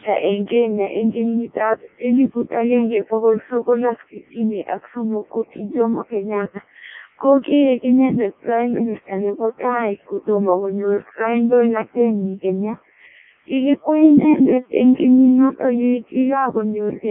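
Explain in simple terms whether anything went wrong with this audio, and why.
Something did go wrong: the speech has been through a Codec 2 vocoder, a very low-rate digital-radio codec, and it sounds robotic and buzzy from start to finish. Codec 2 does not send the actual waveform. It sends only the pitch, loudness and rough tone colour of the voice, and the receiving end rebuilds it from sine waves. At this clip's heavy setting, little of the original survives. The sound is also squeezed into a narrow band of about 200 Hz to 3.6 kHz, with nothing above 3.8 kHz, so it sounds thin and muffled.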